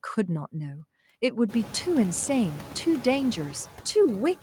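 Noise suppressor artifacts run through the whole clip. The suppressor estimates which frequency bands hold steady background noise and pulls them down frame by frame, cutting the noise by about 11 dB. So the background dips in the gaps and returns beneath the speech. The room noise climbs by about 20 dB around a second and a half in and then sits about 17 dB under the speech, which makes this pumping easier to hear. Unlike a noise gate, which shuts everything off, the reduction here is partial and varies by band.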